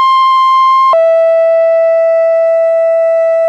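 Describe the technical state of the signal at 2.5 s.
Around 2.5 s the music plays through intact, with no dropout, distortion or other fault at that point.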